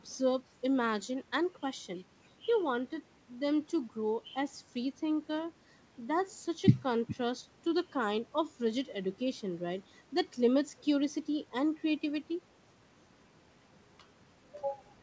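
No technical faults can be heard anywhere in the speech. It has passed through a working call path whose codec leaves nothing above 8 kHz, a wideband limit that fits G.722.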